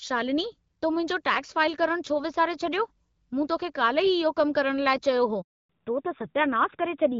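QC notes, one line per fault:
5.41–5.69 s, handover gap: the speech fades out within a few tens of milliseconds and 280 ms of silence follows. The call was passed between networks and no speech frames arrived until the new link came up, so anything said then is missing.
5.69 s to the end, fallback to narrowband: the speech turns duller and rougher, with nothing left above 4 kHz. After the switch the call left the lightly coloured HD Voice (AMR-WB) coding for an older narrowband codec. The rasp points to a low-rate AMR-NB mode near 7.4 kbit/s.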